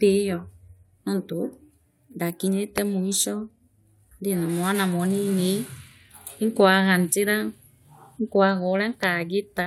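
At 2.78 s there's a loud pop, a sharp spike standing roughly 20 dB above the speech, and a second, slightly softer one at 9.03 s, about 15 dB up. Each is a single click riding over the talking, likely a brief voltage glitch from a plug, switch or static.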